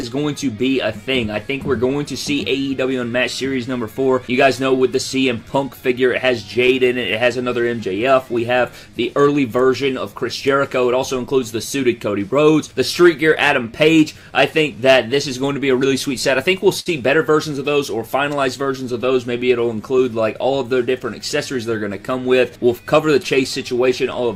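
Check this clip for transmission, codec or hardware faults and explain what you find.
There are a few transmission faults here, all tied to timing and packet delivery between the two ends.

Clock drift between sender and receiver runs through the whole clip. The sender's clock is running slow by roughly 4 percent compared with the receiver's. That means audio arrives a little slower than it's being played out, so the jitter buffer keeps drifting toward empty and the receiver has to keep compensating. You don't hear the drift itself. You hear the constant correction work it forces on the receiver.

Those repeated timing corrections cover 0.22 to 24.28 s. To stay in step with the slow sender, the receiver keeps repeating tiny slices of audio, all in the same direction, so playback ends up at about 97 percent speed. Over the clip that adds something like 0.7 s of stretched material. The repeats aren't evenly spaced, so they come across as faint hiccups and a slightly unsteady, dragging tempo rather than one obvious glitch.

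Scattered short gaps show up in three bursts: 1.87 to 4.60 s, 5.80 to 6.71 s and 8.53 to 9.88 s. In each stretch a few packets, three or four at a time, came in lost or late. The receiver covered every hole by carrying the previous sound forward, so nothing is actually missing. The longest patch in the first burst is only around 15 ms, so these read as brief ticks or small smears.

There's also a short stall from a late packet at 16.80 to 16.89 s. One packet didn't show up on time, the buffer ran dry, and the receiver held the last sound for 62 ms until it arrived, then picked up exactly where it left off. Nothing is lost, but that moment hangs a touch too long, with a slight buzzy or dipping quality.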